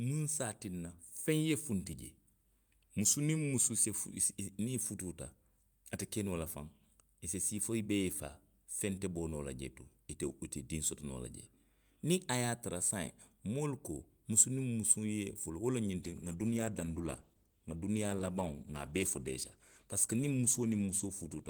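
From 16.02 s to the end, a call bitrate drop starves the encoder, which suggests a fall to around 13 kbps, and the speech turns coarse, watery and muffled.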